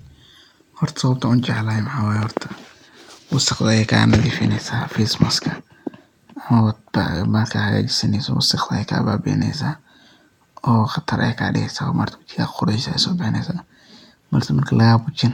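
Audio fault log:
No technical fault can be heard anywhere in the speech signal.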